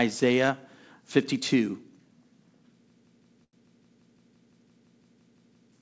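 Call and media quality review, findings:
System hang loop, 2.90–5.72 s: a 171 ms segment repeats sixteen times at about 5.9 Hz, a machine-gun stutter. Computer or driver froze, hardware kept cycling its ring buffer, which fits an 8192-sample buffer.

Short stall from a late packet, 3.44–3.56 s: sound held about 90 ms. Jitter buffer ran empty, last sound stretched until the packet arrived, then resumed.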